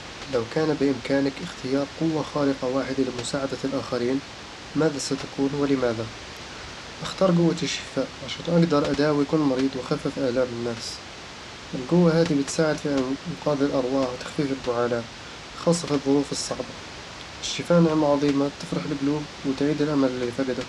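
No technical faults are audible in the speech; the room's background noise sits about 13 dB below it as part of the recording.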